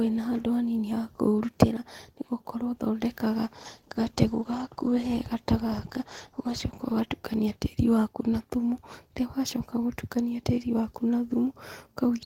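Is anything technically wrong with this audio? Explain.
Yes. From 3.6 s to 7.23 s there is a call bitrate drop. The call's encoder was forced to spend far fewer bits, which fits a fall from about 32 kbps to roughly 17 kbps. The speech turns coarse, watery and duller for about 3.6 s before recovering. Unlike packet loss, the sound stays continuous, with no gaps or clicks.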